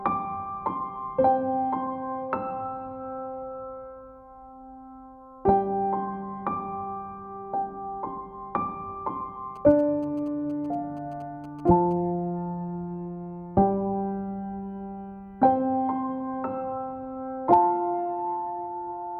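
From 9.56 to 11.93 s, GSM signalling bursts break in. A nearby 2G phone sends short groups of radio bursts. The audio circuit rectifies them. You hear a galloping dit-dit-dit of brief 217 Hz buzzes, roughly 20 dB below the main sound.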